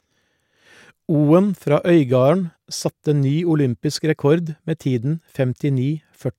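Nothing in the speech stood out as a technical problem on listening.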